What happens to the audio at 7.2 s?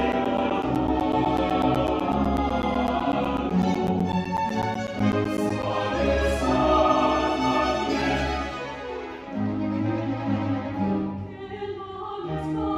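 Nothing goes wrong at 7.2 s; the audio runs through that moment intact, without any dropout, click or distortion.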